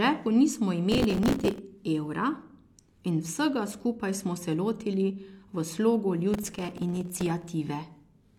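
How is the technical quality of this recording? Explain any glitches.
The recording has two bursts of processor overload crackle, at 0.92 to 1.59 s and 6.34 to 7.49 s, just after "se lotili v slogu". Dozens of missed few-millisecond buffers replay stale fragments, giving gritty tearing rather than one clean dropout.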